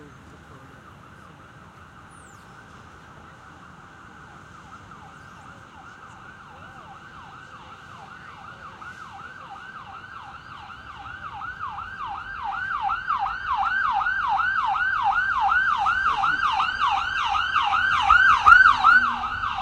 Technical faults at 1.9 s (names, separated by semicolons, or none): none